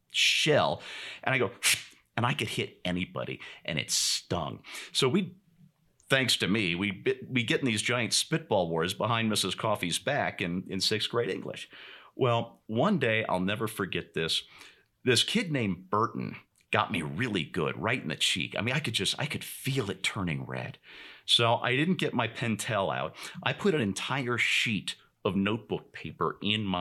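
Nothing stood out as a technical problem on listening through the speech.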